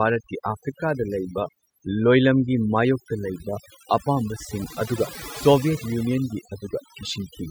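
Overdone noise removal runs through the whole speech clip. A noise reducer set far too aggressively cuts any frequency band that sits close to its noise estimate, so the background drops and breaks up into twinkling specks, and the quieter voice components vanish too.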